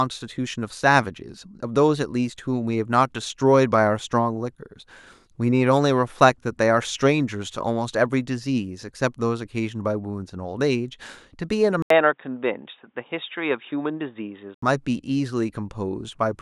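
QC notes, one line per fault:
11.82–14.62 s, input switched to a poorer device: after an 80 ms gap the speech turns dull and boxy, with nothing above 3.8 kHz, a faint new noise floor around 50 dB down and little level change, likely a switch to a narrower-band microphone or headset profile before returning.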